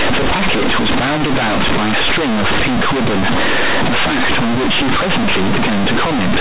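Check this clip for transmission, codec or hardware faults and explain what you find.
A single fault runs through the whole recording: companded audio read as linear. The mu-law telephone bytes are played as plain linear 8-bit samples with no expansion, so every sign change swings across half the range and quiet speech becomes as loud as loud speech. The result is harsh, very loud buzzing distortion with heavy noise in the pauses, over audio that still stops at 4 kHz, as G.711 coding does.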